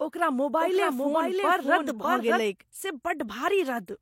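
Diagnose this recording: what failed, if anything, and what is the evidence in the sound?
Doubled audio track from 0.60 to 2.40 s: a dry full-band copy trails by about 0.7 s at about 5 dB down and starts and stops abruptly. The likely cause is a slower second capture path or an out-of-step edit.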